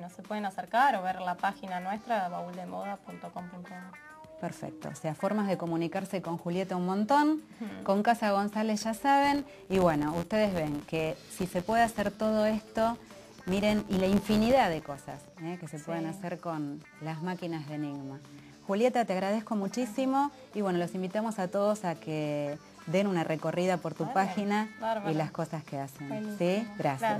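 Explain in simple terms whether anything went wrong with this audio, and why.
Something does go wrong, from about 9.24 to 15.25 seconds. Over that stretch a low, steady buzz sits under the sound, repeating about 86 times a second. This is a filter restarted on every block. The audio is processed in short chunks, and the filter forgets what it was doing at each new chunk. Every chunk starts with a tiny click, and those clicks run together into the buzz. The rate fits chunks of 512 samples. The buzz grows louder as the sound gets louder.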